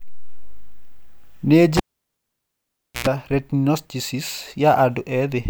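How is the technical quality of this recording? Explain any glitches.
There's one real glitch here: a cable pulled and plugged in, between 1.77 and 3.07 s. You get a pop as the live lead comes out, then about 1.25 s of near silence. As it's pushed back in, the tip touches before the sleeve grounds, so roughly 98 ms of 60 Hz mains buzz bleeds through. A second pop follows as the connection seats and the speech comes back.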